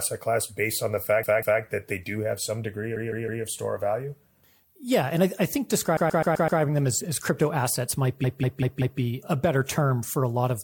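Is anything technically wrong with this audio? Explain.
Yes. The speech stutters four times, replaying a short chunk. From 1.23 to 1.62 s a 192 ms chunk plays twice more. From 2.96 to 3.44 s a 160 ms chunk plays three times more. From 5.97 to 6.61 s a 128 ms chunk plays five times more, and from 8.24 to 9.01 s a 192 ms chunk plays four times more. These are repeated frames: a run of compressed frames was delivered more than once, so the decoder replays it, adding that time to the audio.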